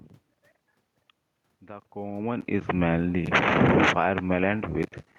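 From 3.2 to 4.01 s the automatic gain falling pulls the level down by about 6 dB as the control reacts to input it judged too loud, or to background noise too strong for its starting gain. Unlike the talker's movement near 2 s, the room noise sinks along with the speech.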